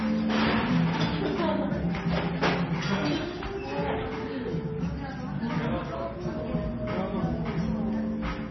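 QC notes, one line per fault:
Throughout: MP3 compression, heavy, likely from encoding at a very low bitrate, roughly what a 23 kbps MP3 would give. The treble stops dead at about 5.9 kHz, so the sound is dull and boxed in, while starved high-band lines flicker in and out between frames, producing a watery, swirling texture and smeared attacks. On a spectrogram, a hard horizontal ceiling near 5.9 kHz sits above patchy, blocky holes that blink frame to frame.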